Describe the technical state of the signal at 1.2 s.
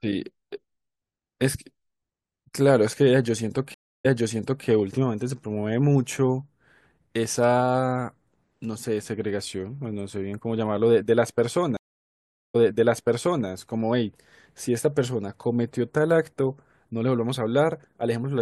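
At 1.2 s the speech signal is intact, with no dropout, click, distortion or other technical fault audible at that moment.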